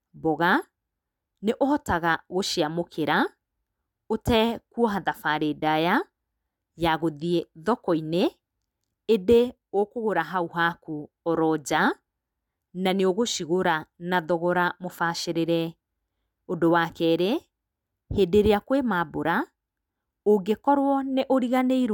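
Nothing in this speech recording stands out as a technical problem, so there's nothing to flag from beginning to end.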